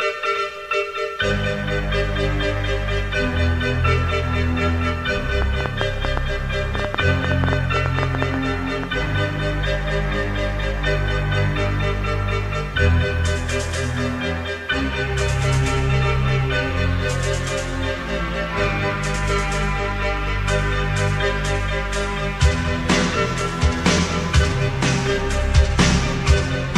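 From 5.42 s to 8.85 s a train of clicks ticks over the sound, around twenty sharp pops at roughly 6.7 per second, spaced unevenly and peaking about 15 dB above the program level. Each click has much the same shape, the likely result of interference from nearby equipment or a faulty connection or power supply. On a waveform they show as thin spikes; on a spectrogram, as narrow vertical lines spanning the full frequency range.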